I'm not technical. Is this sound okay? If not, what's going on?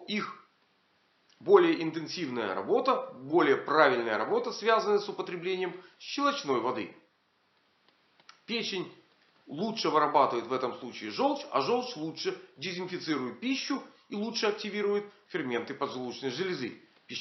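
Yes, nothing stood out as a problem when listening to it.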